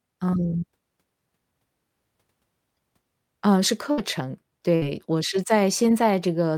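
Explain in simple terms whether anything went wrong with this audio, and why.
Yes, something went wrong twice. In a burst of packet loss, a short run of the speech's data never arrived in time, at 3.91 to 4.00 seconds and again at 4.75 to 4.84 seconds. Each time, the receiver stretched the last bit of sound for about 60 ms, so you hear a brief held buzz or fading hiss. The speech then jumps ahead, with roughly another 60 ms simply missing.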